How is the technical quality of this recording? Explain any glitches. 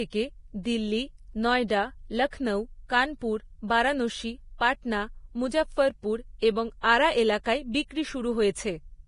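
The technical quality is poor, with heavy lossy coding damage throughout. The speech runs the whole way with nothing above 10.5 kHz, and the remaining treble sounds hissy and grainy. The likely cause is Vorbis compression at a low setting, which fits a bitrate near 29 kbps. The encoder keeps a smooth outline of the spectrum. It then spends too few bits on the fine detail above it. That detail turns to noise of similar energy, so tones roughen and consonant onsets blur.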